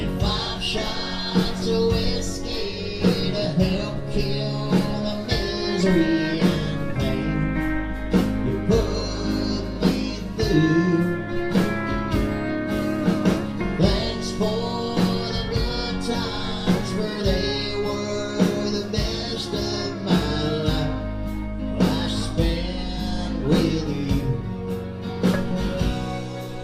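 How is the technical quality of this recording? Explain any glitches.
Nothing in this recording stands out as a glitch, so there's nothing to explain.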